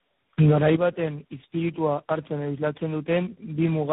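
Throughout the speech there is tandem speech coding: the signal sounds as if it was decoded and re-encoded by several narrowband speech coders in turn, likely four in a row, each working on the previous one's damage. Nothing reaches above 3.8 kHz, but unlike simple band-limiting or a single low-rate codec, the roughness, muffling and warbly swirl are compounded beyond what any one coder produces, pointing to a chain ending in something like G.726.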